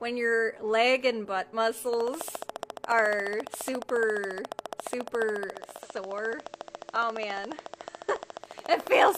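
From 1.94 s to 9.16 s a train of clicks runs, likely from interference by nearby equipment or a faulty connection. About a hundred near-identical pulses arrive at a regular 14.3 per second, peaking roughly 10 dB above the sound and ticking through the pauses too.

At 5.44 s a hybrid receiver loses its digital signal, and the digital radio blends to analogue FM over 452 ms. The level drops about 4 dB, and hiss appears some 30 dB down, until the return at 8.83 s.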